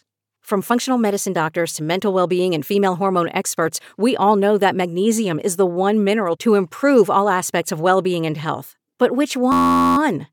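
Right near the end, from 9.52 to 9.97 s, there's a system hang loop: the driver stalled while the hardware kept replaying one 11.6 ms chunk, which fits a 512-sample buffer. It repeats dozens of times, so the speech collapses into a steady buzz at about 86 Hz.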